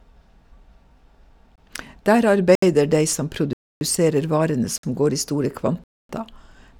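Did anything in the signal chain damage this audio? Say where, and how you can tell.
Yes. Blocks of digital silence hit at 1.56–1.58, 2.55–2.62, 3.53–3.81, 4.78–4.83 and 5.84–6.09 s, lasting 24 to 279 ms. Each cuts to silence with no fade or concealment, pointing to driver buffer underruns rather than network packet loss.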